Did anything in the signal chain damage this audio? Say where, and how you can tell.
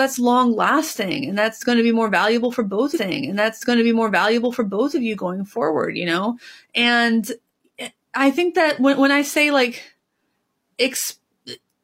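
Yes, at the network/playback stage. A stream segment repeated from 2.92 to 4.93 s. After "more valuable for both", about 2.0 s replays with a blip, then "of you going forward".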